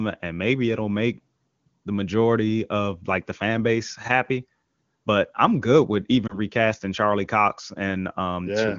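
At 6.27 s, just after "but I'm good with", lost AMR speech frames cause a brief dip or warble until about 6.38 s. Radio errors corrupted one 20 ms frame, and the decoder filled the gap by repeating the previous frame's pitch and vocal tract settings at reduced gain. The surrounding wideband speech sounds clean, which points to the top AMR-WB rate of 23.85 kbit/s.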